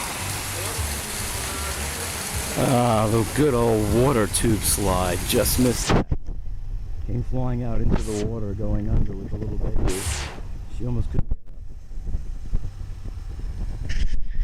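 Hard clipping runs through the audio from 2.27 to 6.13 s, then again at 7.36–8.23, 8.75–9.03, 9.67–10.12, 11.00–11.32 and 13.90–14.39 s. The signal's pushed about 5 to 6 dB past what the stage can pass, so peaks get sliced flat and throw off added harmonics far up the spectrum.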